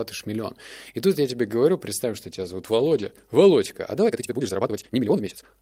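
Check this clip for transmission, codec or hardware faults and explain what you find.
Two problems in this speech. From 2.16 to 3.29 s, right after "я тебе говорю представь", there's a call bitrate drop from 48 to 18 kbps: the encoder coded coarsely and trimmed the highs, so it goes muffled and watery. From 4.02 s to the end, the pace suddenly nearly doubles (about 1.96x) while the pitch holds, sounding rushed. That's likely a time-stretched section, squeezed by dropping short slices.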